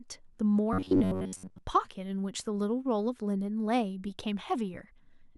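From 0.73 to 1.58 s, the speech turns into robotic sound from repeated short buffers. It becomes a rigid metallic buzz near 94 Hz. Most of the audio in that stretch is a repeated slice of about 11 ms, likely because new audio arrived too seldom.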